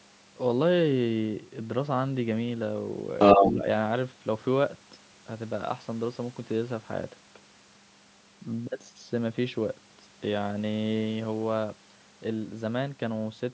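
Other side's voice leaking through, 3.19 to 3.62 s: a second voice sits roughly 10 dB above the talker, likely from loudspeaker echo the canceller failed to remove. Speech suppressed in double talk, 3.45 to 3.62 s: with both sides talking, the talker's voice dips by roughly 10 dB for about 150 ms, likely because the canceller turned everything down.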